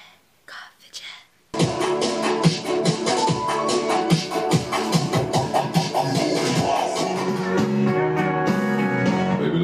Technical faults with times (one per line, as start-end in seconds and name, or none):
1.20-4.17 Bluetooth SBC bit pool drop